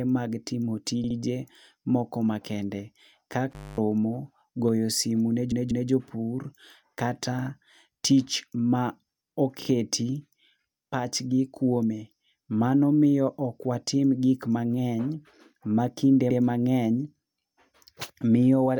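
Right at 1.04 s there's a stutter of repeated frames: a 64 ms chunk of compressed audio gets played twice more, adding 128 ms. The same thing recurs at 5.52 s (a 192 ms block looped twice, adding 384 ms), 9.62 s (a tiny 32 ms block, twice more) and 16.30 s (96 ms, once more). The chunk sizes fit 32 ms frames.

Between 3.51 and 3.78 s there's an intermittent contact. The line opens for about 230 ms, so the speech drops out with crackle on either edge and just faint hiss left in the gap, the way a loose plug sounds.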